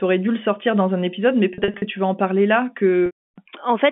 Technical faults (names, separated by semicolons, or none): packet loss with pitch repetition